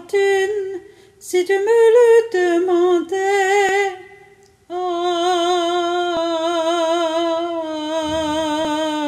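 A recorder likely handling the audio in chunks of roughly 2.5 s drops a sliver, around 20 ms, at each changeover and splices the ends together: audio missing between chunks. The sound skips abruptly at 1.21, 3.69, 6.17 and 8.65 s, evenly spaced.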